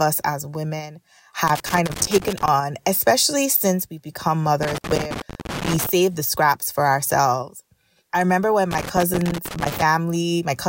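Loose connector crackle at 1.47–2.48 s, 4.63–5.89 s and 8.71–9.82 s: a worn contact repeatedly making and breaking chops the speech into irregular, scratchy bursts.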